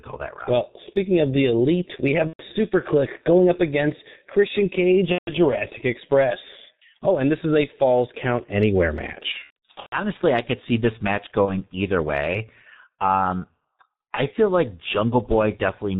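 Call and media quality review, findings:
G.723.1 codec, throughout: muffled, hoarse sound, nothing above 4 kHz, smeared consonants. Fits roughly 6 kbit/s with 30 ms frames. The slow-updating voice model causes the hoarse blur, unlike a plain low-pass, which stays clean.

VoIP packet loss concealed by the speech codec: 2.27–2.43 s after "the elite we have"; 5.12–5.34 s; 9.32–9.97 s, scattered bursts before "I could see this"; 11.45–11.57 s between "could see this match" and "either way". Stretched buzzy tone or coloured noise fading out, then weak sound afterward as decoder recovers. Muted from the third lost frame in longer runs.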